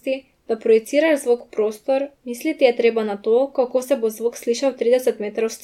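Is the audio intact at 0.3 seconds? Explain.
Yes, the speech at 0.3 seconds plays through intact, with no dropout, click, distortion or other technical fault at that moment.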